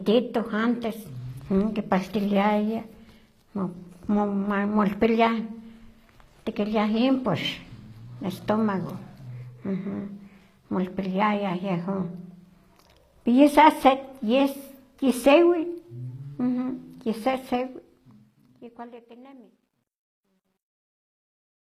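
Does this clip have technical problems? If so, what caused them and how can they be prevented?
Yes. Throughout, the encoder likely used HE-AAC compression at a low rate, fitting about 24 kbps. It keeps only the lower spectrum and rebuilds the treble by copying those bands upward under a coarse envelope. The top end is plainly audible as synthetic, with mismatched harmonics making s sounds gritty, metallic or lispy. Encoding at a higher bitrate with plain AAC, or keeping a lossless master, prevents this.

From 17.36 s to the end, the fade passes through a gain stage that drops low bits without dither, which points to a 12-bit path. As the level falls, the waveform breaks into a few square steps, giving truncation distortion on the fade, gritty and worst from 19.21 s to the end. Applying the fade at a high bit depth and dithering before any reduction prevents it.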